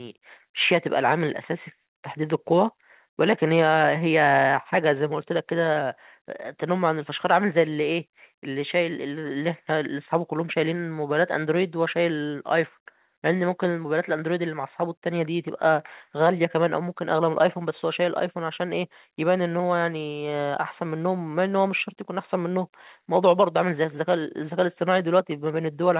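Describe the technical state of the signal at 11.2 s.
At 11.2 s the speech is intact, with no dropout, glitch or distortion, and nothing above 4 kHz, a band limit that fits a narrowband telephone codec such as G.711 mu-law on the call path.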